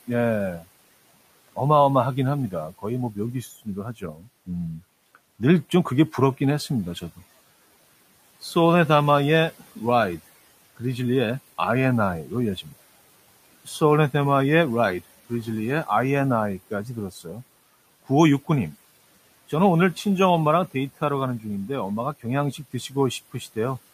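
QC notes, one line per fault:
3.96–4.28 s and 17.11–17.27 s: speech cut by the noise suppressor. Quiet speech was mistaken for noise and dropped about 13 and 12 dB, showing as thinned waveform and faded spectrogram energy.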